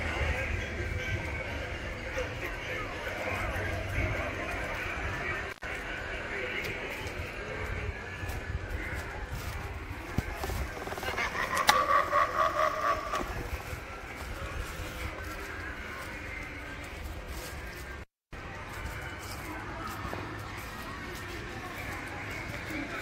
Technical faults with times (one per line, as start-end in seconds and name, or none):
5.50-5.66 intermittent contact
17.97-18.35 intermittent contact